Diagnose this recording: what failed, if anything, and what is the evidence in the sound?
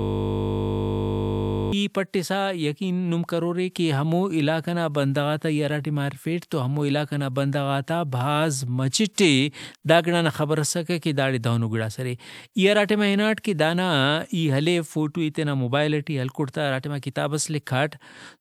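Driver or buffer: a system hang loop, under way from the start, replays one frozen 20 ms buffer until 1.73 s, giving a 50 Hz buzz with identical repeating waveform cycles.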